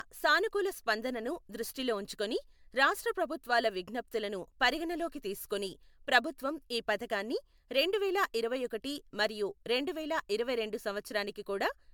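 Speech with generation loss throughout: swirly, hollow, smeared tone and blurred attacks, likely from about seven MP3 re-encodes near 140 kbit/s; the spectrogram shows speckled holes and nothing above 20 kHz.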